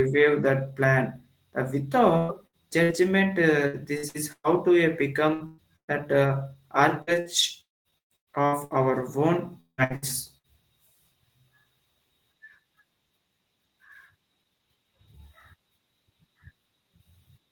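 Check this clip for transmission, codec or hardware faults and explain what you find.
Two kinds of transmission fault are audible, both consistent with a lossy network link.

Repeated packet loss (robotic sound) occurs from 2.17 to 5.91 s and again from 7.02 to 10.47 s. Audio kept failing to arrive, and each hole was patched by extending the last sound before the next loss came. The first stretch has about ten gaps, the longest 119 ms. The second has about a dozen, the longest 174 ms. Roughly a quarter of each span is filler, so the sound turns choppy, with pieces missing.

A long network dropout is the likely cause of the break from 7.61 to 7.88 s, inside the second choppy stretch. About 240 ms of audio is absent. The receiver briefly carries the last sound forward as a fading buzz or hiss, then leaves near-silence for roughly 190 ms. The sound resumes afterwards without the lost portion.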